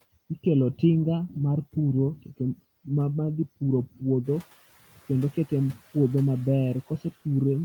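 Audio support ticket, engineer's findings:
Speech cut by the noise suppressor. Suppressor misclassifying speech as noise and gating it down with the background. 3.86–4.03 s, just after "dhi puro", dips up to about 17 dB; 4.80–5.10 s, up to about 15 dB. Around a tenth of a second lost each time, so speech sounds swallowed and faint.

Noise suppressor catching up. Room noise steps up about 12 dB near 4 s, and the suppressor's noise estimate lags. 4.24–4.47 s, after "dhi puro", the louder background leaks through under-reduced, then sinks over about 230 ms as the estimate adapts, ending about 7 dB lower.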